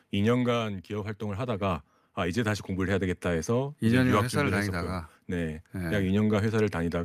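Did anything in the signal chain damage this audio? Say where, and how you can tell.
Yes. Automatic gain rising, from 0.87 s to 3.86 s, in the call processing stage: the speech and the background noise swell together by about 5 dB over those three seconds. The gain control judged the input too quiet and raised its level gradually.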